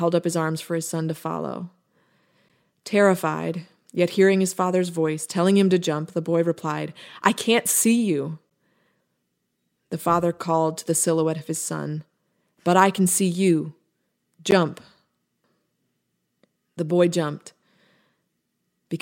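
At 2.49 s, 8.50 s and 14.51 s the speech breaks for about 12 ms each time, a gap between chunks. The joins fall exactly 6 s apart, which fits audio delivered in 6-second blocks with a short stretch of silence inserted at each boundary, from padding or a late start on the next block. Nothing is dropped. The signal simply pauses, so each join is heard as a brief, hard-edged hole, repeating at the same regular interval.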